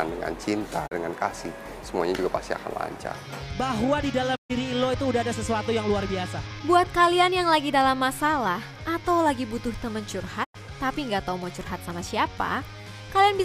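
Three digital broadcast dropouts mute the audio at 0.86 s, 4.35 s and 10.43 s. Each fades out over about 20 ms, and gaps of 32, 128 and 96 ms follow. This fits the receiver discarding one, four and three corrupted 32 ms frames, so the sound from those gaps is lost.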